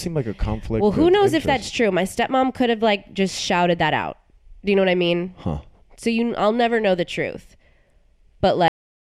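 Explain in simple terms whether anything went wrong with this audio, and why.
Something went wrong at the very end. The speech stops abruptly at 8.68 s, in the middle of a sound. It does not fade out. It drops straight into complete digital silence, which lasts until the clip ends about a third of a second later. This is a cut-off end. The last stretch of audio was never saved or played back, so the recording simply halts before the speaker finishes.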